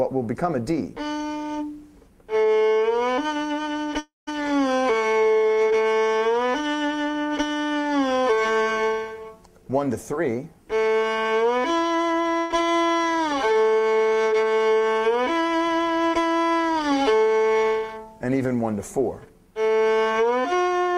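At 3.99 s the sound breaks into a held, fading buzz or hiss, then about 160 ms of near silence before it returns at 4.29 s with roughly 280 ms gone, most likely a long network dropout. The receiver ran out of real audio and its concealment died away, which a short burst never reaches.

At 12.39 s a burst of packet loss leaves about 120 ms missing, filled by a continuation of the preceding sound that softens but never drops to silence before the audio resumes at 12.52 s, skipping ahead.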